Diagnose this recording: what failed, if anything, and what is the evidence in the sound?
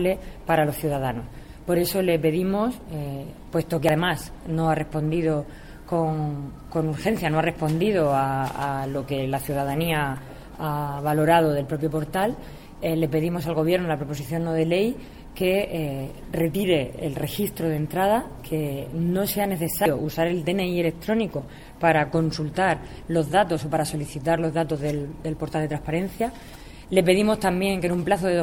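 The codec stage failed here: damaged data in a compressed stream. There's a short glitch at 3.89 s and another at 19.86 s, where corrupted bytes threw the decoder off. It lost frame sync and had to hunt for the next valid header before decoding again.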